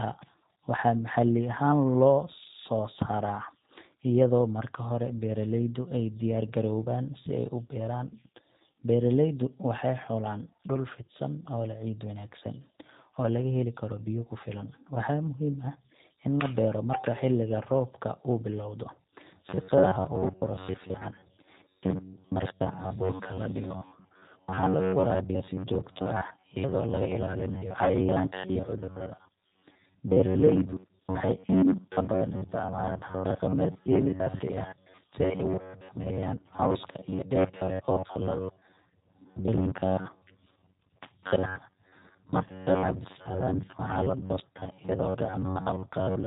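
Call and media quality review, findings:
G.729 codec damage, throughout. Call carried on a low-rate CELP speech codec, which fits G.729A at 8 kbit/s. Speech rebuilt from a vocal tract filter, pitch predictor and sparse pulses per 10 ms frame. Nothing above 4 kHz. Audible roughness and a synthetic edge on every phrase.

Robotic sound from repeated short buffers, 19.49 s to end. Likely cause: audio delivered too seldom, so the playout side loops the last short buffer while fresh audio is dropped. Roughly half the signal is repeats. Rigid metallic buzz at 93.8 Hz, a period of about 10.7 ms, which fits a buffer of that length. Speech contour still loosely followed.

VoIP packet loss concealed by the speech codec, 27.84 to 27.90 s. Gap of 20 ms, which points to a single lost packet. Decoder extrapolates from its last pitch and filter state with falling gain. Brief buzzy smear and fade, then weak, distorted recovery as the following frames rebuild from the concealed state, layered on the ongoing robotic buzz.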